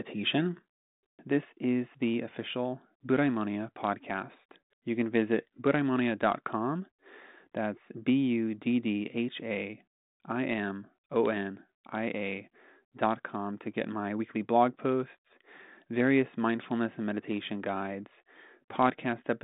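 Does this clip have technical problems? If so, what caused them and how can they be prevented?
No, there's nothing wrong here; it's just speech heard over a 40 kbit/s G.726 telephone path, so it sits in the usual narrow band of roughly 150 Hz to 3.7 kHz with nothing above about 3.8 kHz, which is simply how that line sounds.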